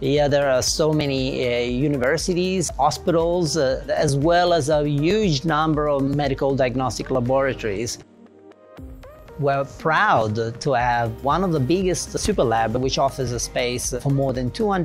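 From 1.01 s to 14.29 s, regular ticks recur every 1.02 s. These are periodic USB or driver dropouts. Something stalls the audio path at a fixed interval. A few milliseconds of sound are skipped each time, so the signal jumps and clicks.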